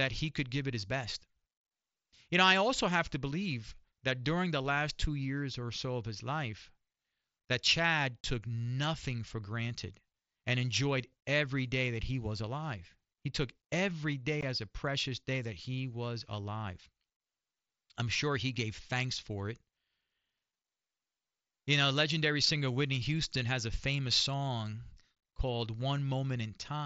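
Speech recorded through a Bluetooth headset on a wideband mSBC link, with unconcealed Bluetooth headset packet loss in three places. At 8.23 s, just before "nothing for granted and", a tiny hole cuts the voice with a hard edge. At 14.41 s, between "took every day" and "as a precious day", there's another abrupt gap. From 25.15 to 25.23 s, after "has a famous song", several short losses scatter across about 75 ms, the longest about 22.5 ms, giving a brief chopped, crackly patch. The headset just drops the missing audio without filling the gaps.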